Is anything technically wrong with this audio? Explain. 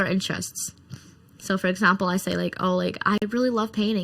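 Yes, two faults are audible in this speech clip.

Channel delay (comb filtering) runs through the whole clip. One channel arrives under a millisecond later than the other, and when the two are combined into mono, the shared content cancels at a series of evenly spaced frequencies, starting around 700 Hz and repeating above it. Those fixed notches strip out parts of the spectrum, so the voice sounds hollow and phasey from start to finish.

A gap between stream segments appears from 3.18 to 3.22 s, right after "say like oh like". The timestamps of two adjoining pieces of the stream don't meet, leaving a 42 ms space that the player fills with silence. No audio is lost; the sound simply stops with hard edges and resumes. The timing fits a stream split into six-second segments, with this hole falling where one segment hands over to the next.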